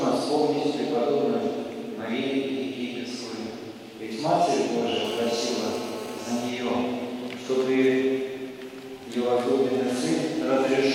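From 5.05 to 6.5 s, GSM phone buzz: a nearby handset's 217 Hz call bursts get rectified into a hard rasp about 14 dB below the signal, appearing as evenly spaced harmonic lines on a spectrogram.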